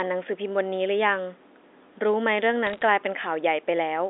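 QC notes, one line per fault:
2.67 to 2.82 s, bit errors on a digital phone line: a brief burst of crackle, with sharp ticks over otherwise unchanged speech. Around half a percent of bits flip on the G.711 A-law path, and each flip corrupts one sample. Hits on sign or high-order bits jump hardest.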